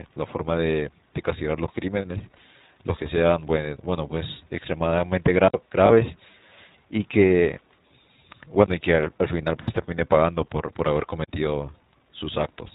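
Throughout, the speech carries plainly audible iLBC codec damage. Nothing above 4 kHz survives, so the sound is narrowband and slightly rough and synthetic, a result of each frame's excitation being coded on its own without help from the previous frame. The texture fits iLBC's 15.2 kbps mode with 20 ms frames.

At 2.37 s a single lost iLBC frame, 20 ms, is concealed. The decoder repeats the last pitch cycle blended with noise, giving a brief held, slightly buzzy vowel before normal sound resumes almost immediately.

From 5.48 to 5.54 s there is a 60 ms block of digital silence. The signal drops straight to silence and returns with no fade, heard as a short hole. The likely cause is an output buffer not filled in time.

From 5.86 to 5.92 s two frames are lost, 40 ms in total, and the concealment stretches into a longer buzzy, breathy hold. From 9.62 to 9.70 s three frames go missing, 60 ms, filled by the same repeated pitch cycle. 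Because iLBC frames are independent, recovery is quick after each gap.

From 11.24 to 11.28 s a second block of digital silence, 40 ms, produces the same hard cut.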